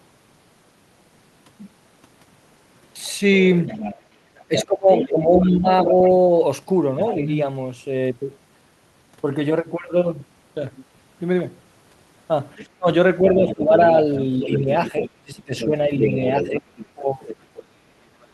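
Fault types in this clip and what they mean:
Other side's voice leaking through: From 3.67 to 7.43 s and again from 12.57 to 18.26 s, a second, fainter voice sits under the talker, roughly 10 dB down. It is most likely far-end audio from a loudspeaker that the echo canceller did not fully remove. On a spectrogram it shows as a separate set of harmonic stripes and formants that don't follow the main voice's pitch. On the waveform, low-level activity fills the gaps between the talker's phrases.
Speech suppressed in double talk: While that second voice is present, the talker's own level sinks, at its worst by around 20 dB. This happens between 4.48 and 5.93 s for about a second in total, and between 12.78 and 17.8 s for about two seconds in total. The likely cause is the echo canceller turning everything down when both sides speak at once. The waveform envelope shows abrupt notches, and the spectrogram shows the talker's energy thinning or breaking into patches.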